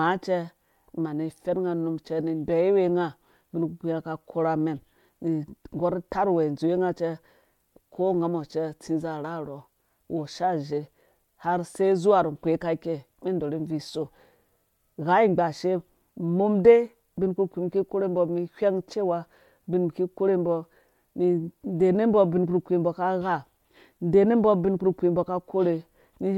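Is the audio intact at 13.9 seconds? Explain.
Yes, at 13.9 seconds the audio is intact, with no dropout, click, distortion or other technical fault to be heard at that point.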